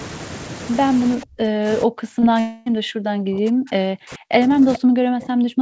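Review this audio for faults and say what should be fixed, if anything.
Speech suppressed in double talk, 1.16 to 1.68 s and again from 1.85 s to the end: the voice is pulled down by about 40 dB, in the first stretch for about half a second. This is likely an echo canceller treating simultaneous far-end talk as echo and attenuating everything. Tuning the canceller's double-talk detector to hold near-end speech when both sides talk would prevent it.

Short concealed packet loss at 2.2 s: a 20 ms gap is patched with synthesized continuation of the preceding sound, giving a brief smear before the real audio blends back in. A larger jitter buffer or forward error correction on the call would prevent it.

Long network dropout, 2.4 to 2.68 s: for about 260 ms the original audio is replaced by a continuation of the last sound that trails away, and the speech resumes with that span missing. The likely cause is a network stall that left the receiver nothing to decode. 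Redundancy or a more stable network path would prevent it.

Echo leak, 4.73 to 4.77 s: a faint, delayed copy of the voice appears about 440 ms after the original, roughly 15 dB below the speech. This is likely residual loudspeaker pickup that the far end's echo canceller did not fully remove. Better echo cancellation or a headset at that end would prevent it.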